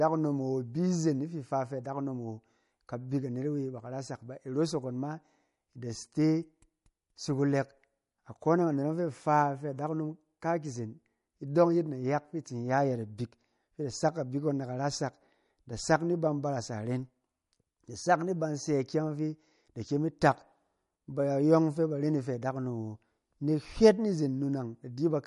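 Throughout, the speech has plainly audible swirly, watery artefacts and nothing above 11.2 kHz, likely MP3 compression at a low bitrate, which fits roughly 48 kbps.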